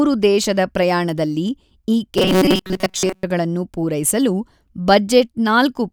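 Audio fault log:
2.18–3.23 s, robotic sound from repeated short buffers: right after "ದೇಶದ ಪ್ರಯಾಣದಲ್ಲಿ ಈ" the speech becomes a rigid, metallic buzz at 188 Hz that still roughly tracks the syllables. This is likely caused by new audio arriving too seldom, with a slice of about 5.3 ms replayed over and over while most of the real signal is skipped. Unlike codec warbling, the buzz holds one fixed pitch instead of smeared, shifting tones.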